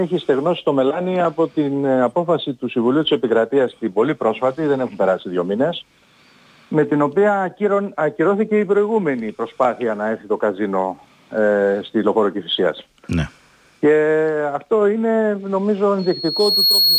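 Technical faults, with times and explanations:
15.99–16.99 s, loudspeaker feedback squeal: in the final second a single pure tone near 4.3 kHz appears and swells over roughly three quarters of a second until it sits about 5 dB above the rest of the sound, holding to the end of the clip. The microphone is hearing the loudspeaker it drives, and at 4.3 kHz the loop returns more energy than it sends, so that frequency feeds on itself and keeps rising.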